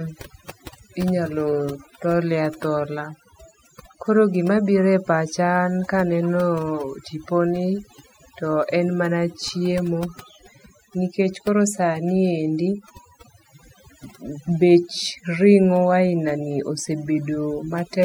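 From start to finish the speech carries overdone noise removal: suppression set far too hard strips individual frequency bands near the noise floor, taking soft speech detail along. Gaps fall to near silence with twinkling specks, and a spectrogram shows scattered isolated blips against a blank background.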